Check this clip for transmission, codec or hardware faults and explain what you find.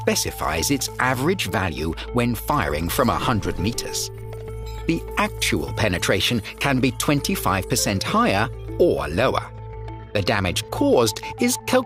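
Nothing here points to a transmission, codec or hardware fault; the audio holds together the whole way with nothing out of place to flag.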